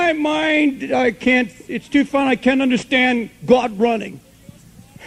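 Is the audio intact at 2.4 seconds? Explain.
Yes, the audio at 2.4 seconds is intact, with no dropout, click, distortion or other fault at that moment.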